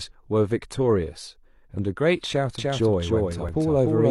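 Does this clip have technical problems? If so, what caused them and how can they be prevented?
Yes. From 2.58 s to the end of the speech, a second full-band copy of the sound trails the original by roughly 300 ms and sits about 5 dB lower. It has no decay or room colouring, and it appears abruptly. This is a doubled audio track, likely from the same signal reaching the mix twice, once through a slower capture path or an out-of-step edit. To prevent it, route each source into the mix only once and check edits for leftover duplicate copies.

Between 3.49 and 3.53 s, the waveform jumps and about 40 ms of sound drops out, heard as a brief skip. This comes from an overlap between stream segments: the time stamps of two adjoining segments claim the same stretch of time, so the player cuts that stretch away even though the audio was never actually repeated. To prevent it, generate segment time stamps from one continuous clock so that consecutive segments meet exactly without overlapping.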